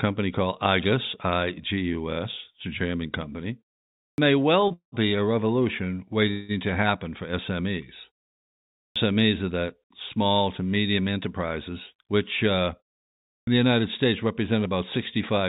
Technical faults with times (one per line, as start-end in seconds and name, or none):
4.08-4.18 clipped start after a pause
4.68-4.73 short stall from a late packet
4.73-4.95 call audio freeze
6.31-6.52 call audio freeze
8.86-8.96 clipped start after a pause
11.11-12.14 jitter buffer speed-up
12.60-14.26 jitter buffer speed-up
13.38-13.47 clipped start after a pause